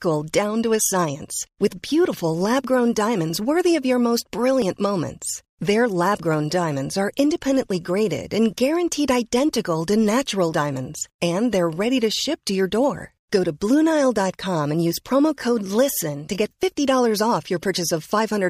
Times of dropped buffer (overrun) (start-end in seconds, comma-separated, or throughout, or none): 4.62, 16.63